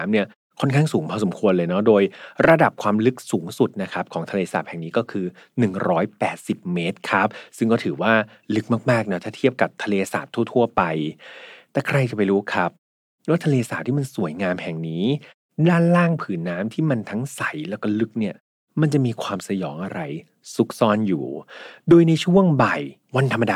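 No technical faults are present.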